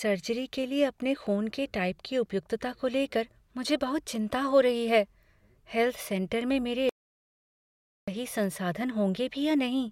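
Audio dropout to silence from 6.89 to 8.08 s, right after "में मेरे": the speech cuts to 1.18 s of dead silence with no room tone, likely from a lost input.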